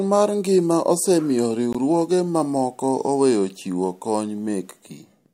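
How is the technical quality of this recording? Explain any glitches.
The speech has one brief glitch, at 1.73 s, where the sound cuts to silence for about 19 ms and then resumes. The likely cause is a Bluetooth stall: radio interference delayed packets, the headphones' buffer emptied, and playback paused until the resent data arrived. Unlike a click or a concealed packet loss, there is no burst of noise or smeared sound, only a clean gap of silence before the speech continues.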